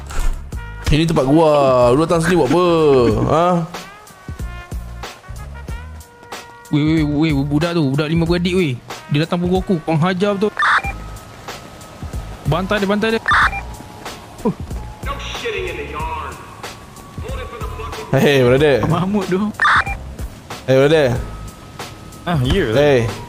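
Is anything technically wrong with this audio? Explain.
Yes. Periodic USB or driver dropouts occur between 12.52 and 14.52 s, recurring every 0.5 s, about five in all. Something on the system appears to stall the USB link or audio driver at a steady interval, and each stall drops around a millisecond of audio outright rather than padding it with silence. The splice where the audio closes over each gap produces an evenly spaced tick against the sound.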